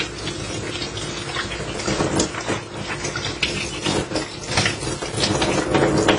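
Everyday sounds make up this 6-second clip, which was likely passed through AAC compression at a low bitrate, consistent with about 24 kbps AAC-LC. Nothing remains above 10 kHz, and the codec damage is plainly audible as dull, smeared texture. A loose connector making and breaking contact chops the signal into irregular bursts of crackle from 1.71 to 2.10 s and again from 4.97 to 5.17 s.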